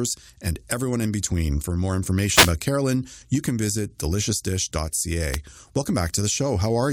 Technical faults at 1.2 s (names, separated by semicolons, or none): none